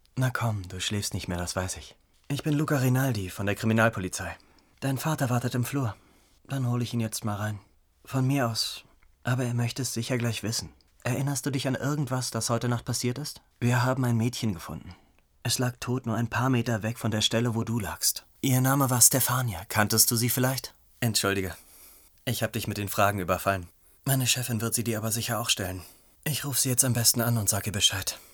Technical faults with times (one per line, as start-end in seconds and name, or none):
17.68-28.33 pre-emphasis left on